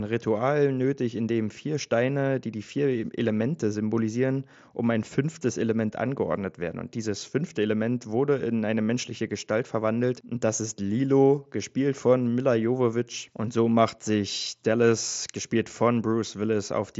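No technical faults can be heard anywhere in the speech. It comes through the Bluetooth mSBC headset codec, which leaves nothing above about 7.7 kHz and adds a light graininess on the louder moments.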